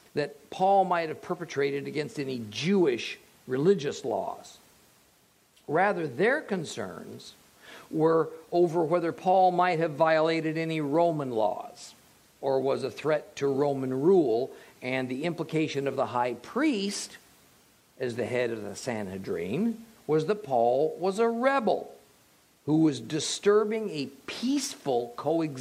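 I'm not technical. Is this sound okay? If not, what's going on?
Yes, nothing in this sound stands out as a problem.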